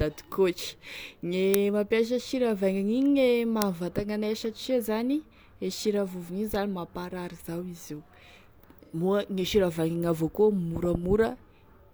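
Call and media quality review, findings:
Uninitialised buffer: sub-millisecond loud cracks at 1.54 s (before "mampiasa sira") and 3.62 s (before "anay satria"). Stale memory was played out, which fits a 32-sample block. Full-band vertical spikes on the spectrogram.

AAC frame loss with concealment: smeared, phasey patch in the speech, 8.85–8.95 s, about 85 ms, consistent with two lost frames. The decoder filled in from the previous spectrum. The spectrogram shows blurred, flattened harmonics.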